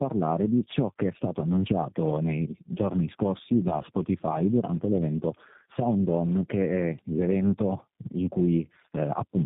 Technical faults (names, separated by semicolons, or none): tandem speech coding